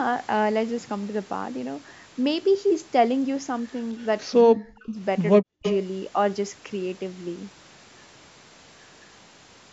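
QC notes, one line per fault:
3.99–4.06 s and 5.63–5.76 s, echo leak: a delayed copy of the speech comes back about 219 ms late. It's barely there at first, about 40 dB down, then only about 10 dB under the speech. Likely a far-end loudspeaker echo the canceller didn't fully catch.
4.44–4.98 s and 5.41–5.64 s, speech suppressed in double talk: the talker gets pushed down in chunks, dropping as much as about 40 dB, likely because the echo canceller turned down both sides while the other end was talking too.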